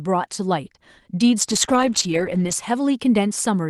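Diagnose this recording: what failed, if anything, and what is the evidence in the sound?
Call bitrate drop, at the network and codec stage: from 1.41 to 2.61 s the speech turns rough and muffled, with the low point lasting about 1.1 s. The coarser coding and lost top end fit Opus falling from 32 to 9 kbps after the call's bandwidth estimate collapsed.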